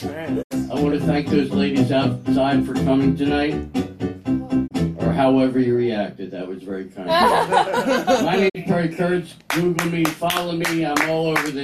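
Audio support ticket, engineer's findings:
Digital broadcast dropout at 0.41–0.53, 4.66–4.73, 8.48–8.57 s: receiver muting on bad frames, 20 ms fades, full-band spectrogram gaps, flat waveform; lengths fit 24 ms frames.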